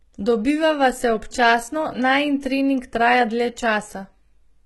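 Throughout the speech, the treble sounds synthetic: s sounds come out gritty and lispy, with a metallic edge above the crossover. This is likely HE-AAC compression, heavily damaged at what fits a bitrate near 16 kbps, with the upper band rebuilt from copied lower bands whose harmonics fail to align.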